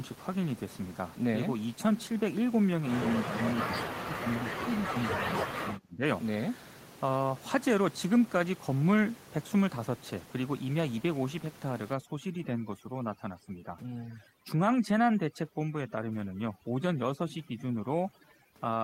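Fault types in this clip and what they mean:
Speech suppressed in double talk: From 3.04 to 6.04 s the speech drops deeply, by roughly 30 dB. Likely the echo canceller muted it while both sides talked.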